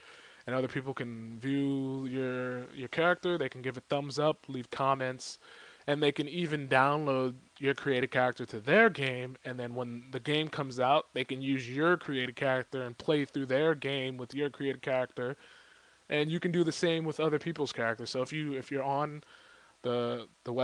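No technical faults can be heard anywhere in this audio; the signal stays continuous and stable throughout.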